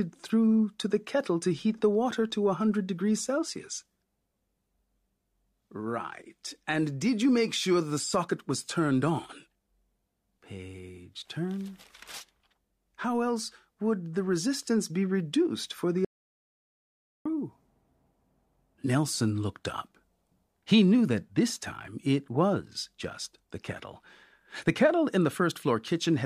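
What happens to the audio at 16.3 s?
At 16.3 s the speech sits inside an audio dropout to silence, 16.05 to 17.25 s, right after "be reduced for the". For 1.2 s there is total silence with no room tone, likely from a lost input while silence was still written.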